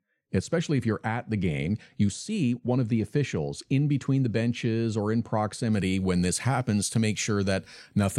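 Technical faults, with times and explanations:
0.00 to 5.73 s, de-emphasis applied wrongly: the speech sounds dull and muffled, the treble sloping smoothly away to about 14 dB down at 10 kHz, until "when this happens to". A treble cut meant to undo pre-emphasis was applied where none existed, or applied twice.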